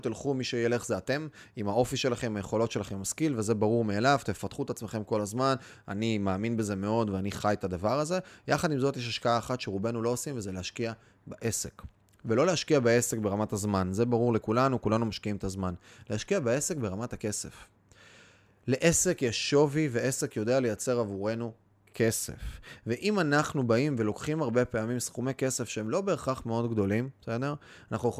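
No technical faults can be heard anywhere in the recording.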